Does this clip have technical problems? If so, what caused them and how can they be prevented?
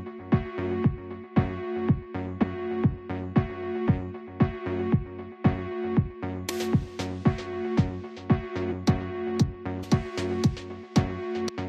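Yes. Damaged data in a compressed stream causes brief blips at 2.42–2.44, 6.48, 8.71–8.73, 9.82–9.84 and 11.47–11.50 s, where corrupted frames are misdecoded before the decoder resynchronises. Prevent it by transferring and storing files with checksums and error-checked delivery so compressed frames arrive intact.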